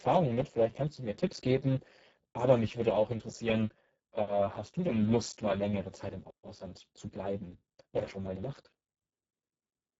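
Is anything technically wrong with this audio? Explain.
Yes. For the whole speech clip, the audio carries heavy Speex codec damage, consistent with a very low bitrate of roughly 6 kbps. At that rate the CELP coder has too few bits to describe the excitation, so the speech sounds hoarse and grainy. The upper band is mostly a synthetic, noise-like fill rather than real detail, and nothing is present above 7.7 kHz.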